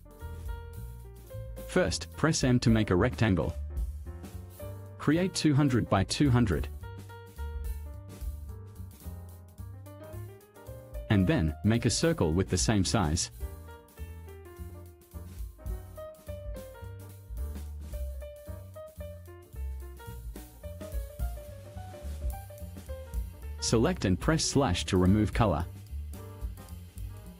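From 15.84 to 16.18 s, a jitter buffer slow-down repeats pitch periods to rebuild its reserve, adding 41 ms. The audio drags at 90% speed with unchanged pitch, and the waveform shows duplicated cycles.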